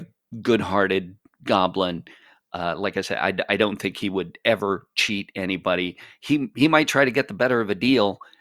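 No technical faults can be heard anywhere in the speech.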